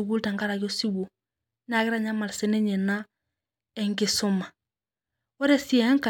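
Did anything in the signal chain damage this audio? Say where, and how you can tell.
No, no signal chain damage.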